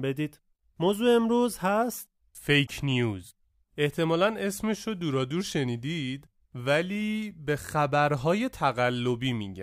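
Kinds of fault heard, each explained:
Damaged data in a compressed stream: a stretch of the encoded speech arrived corrupted, so the decoder could not read those frames correctly, lost its place and had to search forward for the next valid frame header before playback could resume. In this clip that shows as a short garbled disruption from about 2.63 to 2.69 s, roughly 70 ms where the speech is broken by decoding glitches rather than carrying on cleanly.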